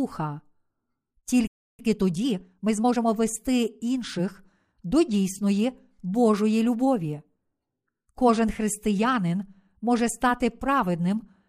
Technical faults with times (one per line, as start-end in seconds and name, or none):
1.47-1.79 playback stall
1.79-3.05 time-compressed catch-up